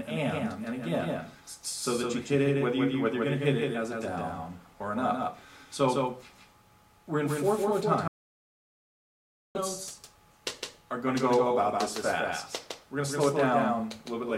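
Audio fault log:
Throughout: doubled audio track. A second full-band copy of the same audio runs about 150 ms behind the original, roughly 5 dB quieter, so every onset is followed by a distinct repeat rather than a blur. The copy carries no decay or room colour, which separates it from reverberation or an acoustic echo. The likely cause is the same signal being captured a second time through a slower path, or an edit that left two copies out of step.
8.08 to 9.55 s: audio dropout to silence. The sound cuts off mid-flow and returns 1.47 s later, and the gap between holds pure silence with no room tone underneath. Whatever occurred during that stretch is not recoverable from the clip. The likely cause is a loss of input, through a disconnected device, a failed link or a stray mute, while the recorder or encoder kept writing silence.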